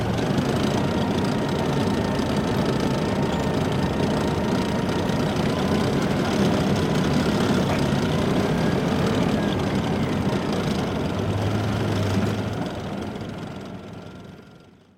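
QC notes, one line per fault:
Throughout: sample clock jitter. A faint hiss and roughness ride on the sound, strongest on loud, bright passages and gone in silence. The converter clock wanders by a few microseconds, so steep waveform slopes are sampled at the wrong moment. The error sits about 35 dB below the signal.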